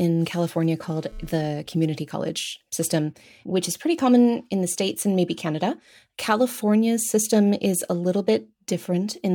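From 0.83 s to 1.48 s a hard, raspy buzz cuts in under the speech, pitched at about 217 Hz with a dense stack of harmonics and no relation to what is being said, sitting about 28 dB below the speech. This is GSM phone buzz: a nearby 2G handset exchanging data sends radio bursts 217 times a second, the audio circuitry rectifies them, and the buzz comes and goes with the data rather than holding steady.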